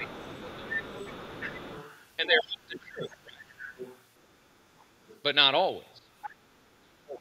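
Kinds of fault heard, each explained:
Speech suppressed in double talk: The talker's level drops sharply in places, by about 15 dB early on (0.0 to 0.95 s), about 25 dB between 2.2 and 3.52 s, briefly at 6.0 s, and by about 35 dB from 6.8 s to the end. This is likely an echo canceller turning everything down while both sides talk at once.
Other side's voice leaking through: A second, fainter voice sits under the talker from 0.02 to 2.07 s, from 3.02 to 5.22 s and again from 6.22 to 6.46 s, around 15 to 20 dB below the main speech. It is likely far-end audio from the loudspeaker that the echo canceller failed to remove. Unlike room reverberation, which smears the talker's own voice, this is a separate voice running alongside it.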